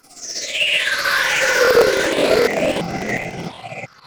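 At 0.94 s a single brief glitch cuts through the sound. It is a corrupt FLAC frame: flipped bits went through because the decoder did not check the checksum, so the decoder's prediction ran on wrong values from the damaged bit on. The following frame plays clean.

From 1.57 to 3.61 s a gritty crackle and tearing rides on top of the audio. This is processor overload crackle. The processor repeatedly missed its deadlines for short buffers of around 10 ms, about a hundred of them. Each miss replayed a fragment of old audio with hard edges.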